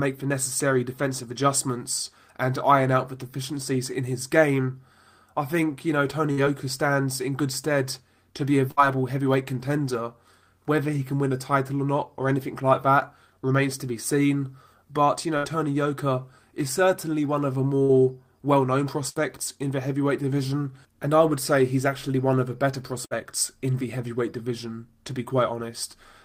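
Six short dropouts turn up at 6.31, 8.71, 15.37, 17.83, 19.09 and 23.05 s, each a burst of packet loss about 60 ms long. Each time, the receiver didn't get the audio in time, so it stretched the last bit it had and faded it down for roughly 55 to 63 ms. You hear a brief held buzz or dying hiss, and then the sound picks up a little further on with that chunk gone.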